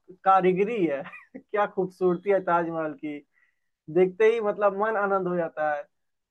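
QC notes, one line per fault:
No faults were heard anywhere in the recording on listening.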